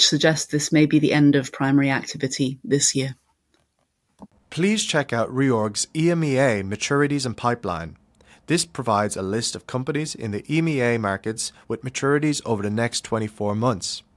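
No technical faults can be heard anywhere in the speech recording, with the signal holding steady throughout.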